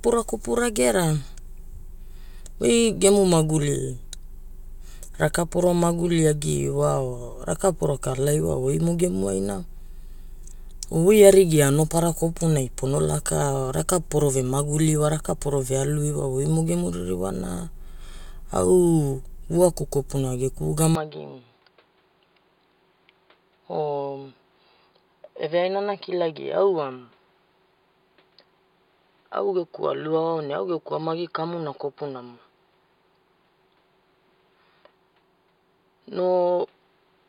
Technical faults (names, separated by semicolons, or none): input switched to a poorer device